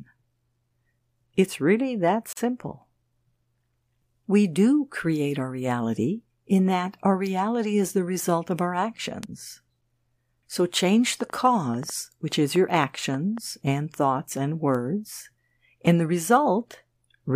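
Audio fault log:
2.33–2.37 s, gap at a join of encoded pieces: after "really that", sound drops out for about 43 ms. Separately encoded pieces were joined with their padding silence left in.
9.23 s, 12.77 s, 14.75 s, bit error spikes: single sharp ticks. One to three samples jump by a power of two and snap back, spreading the tick across the spectrum. The first follows "the result of our".
11.21–13.39 s, train of clicks: about ten similar clicks at an uneven 4.6 per second, peaking roughly 5 dB above the speech, ending before "and thoughts and". Likely interference or a faulty connection or power supply.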